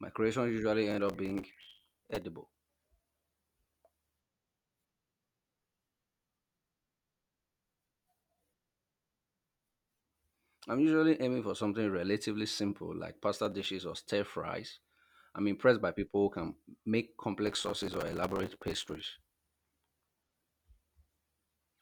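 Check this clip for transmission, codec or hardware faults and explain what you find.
The clip has processor overload crackle in three bursts: 0.91–2.22 s, 13.45–13.66 s and 17.47–19.06 s. Buffers of about 5 ms repeatedly missed their deadlines and replayed stale fragments with hard edges, giving gritty tearing over the speech. Unlike isolated network dropouts, it comes as dense clusters that stop cleanly.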